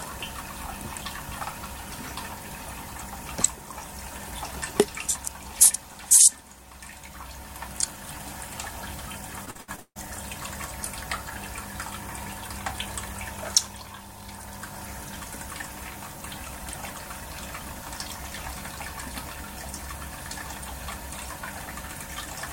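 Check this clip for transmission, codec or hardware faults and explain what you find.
There is one transmission fault: repeated packet loss (robotic sound) from 9.45 to 9.97 s. Six gaps in the packet stream, the longest 156 ms, were each patched by stretching the previous sound, covering about 62% of that half-second. The result is choppy audio with pieces missing.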